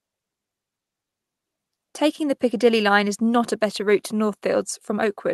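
Nothing's technically wrong with this speech clip; it's come through an ordinary call path, with the codec's top end sitting at about 12 kHz as you'd expect for that setup.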